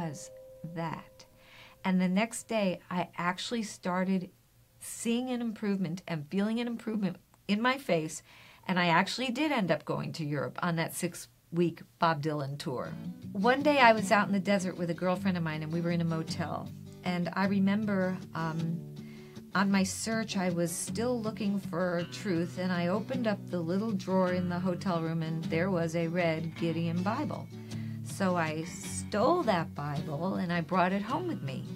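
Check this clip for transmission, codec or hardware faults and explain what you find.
No fault of the kind asked about can be heard anywhere in the clip. There is nothing to point to at any moment in it.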